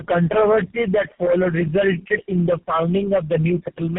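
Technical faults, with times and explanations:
Throughout, tandem speech coding. The speech sounds decoded and re-encoded several times, which points to two AMR-NB stages and a final GSM full-rate stage joined by G.711 links. Each coder compounds the previous one's errors, so the speech turns rough, muffled and warbly, with nothing above 3.4 kHz.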